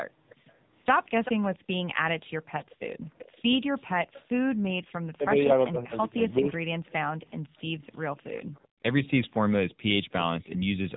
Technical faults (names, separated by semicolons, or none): AMR narrowband mobile codec; echo leak; background gated by the echo canceller; speech suppressed in double talk